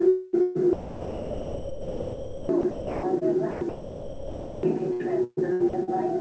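A clip of everyday sound that comes through a call path with nothing above 8 kHz, which fits a G.722 wideband codec. It's chopped by the voice detector, likely on the sender's side, from 0.08 to 3.23 s, 3.51 to 4.63 s and 4.93 to 5.89 s. About 2.5 s, 1.04 s and 0.35 s are swapped for comfort noise, so the sound drops in and out.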